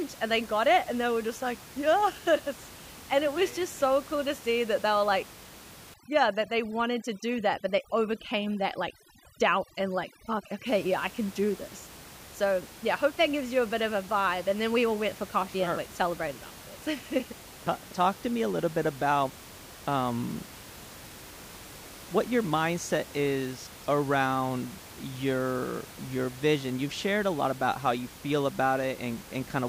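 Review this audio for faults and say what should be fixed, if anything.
Overdone noise removal hits the speech from 5.94 to 10.66 s. A suppressor set too aggressively zeroes any frequency band near its noise estimate, so the steady room noise, about 19 dB below the speech elsewhere, collapses into near silence sprinkled with twinkling specks. On a spectrogram, the gaps between syllables go dark, speckled with isolated bright dots, and the speech harmonics look ragged, with holes where quieter components were removed. Reducing the suppression depth, or leaving some noise floor in place, would prevent it.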